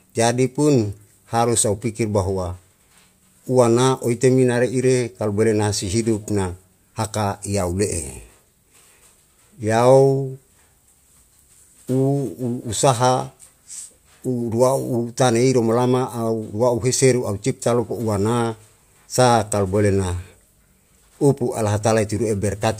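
Nothing goes wrong anywhere in this speech recording; there's not a single technical fault to point to.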